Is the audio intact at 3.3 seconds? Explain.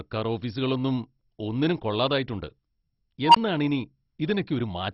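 No. From 3.25 to 3.36 s there is an unstable filter fault. A tone of roughly 1 kHz swells over about 97 ms into a loud squeal, clips, and is followed by about 20 ms of silence. A recursive filter with bad coefficients feeds its output back so it grows until the numbers overflow, and the output drops out until the filter resets. Feedback howl or a test tone would sustain or hold its level. This one ramps up, clips and then stops dead.

Underneath, as at every other moment, the speech is dull, with nothing above 10.6 kHz, and has a gurgling, granular texture as upper sub-bands flicker on and off and the remaining ones are coarsely quantised. The likely cause is heavy MP2 compression, and the degree of damage fits a very low bitrate of around 32 kbps. A plain low-pass filter would also remove the top, but it would leave the remaining sound clean rather than gritty and unsteady.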